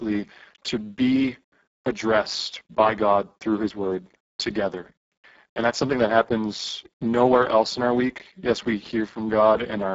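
The speech here has passed through the Speex codec at a very low rate, which fits a setting near 6 kbps, and the damage runs throughout. With so few bits left for the excitation, the voice turns noisy and hoarse, and above 4 kHz only a shaped noise-like fill remains, with nothing above 7.7 kHz.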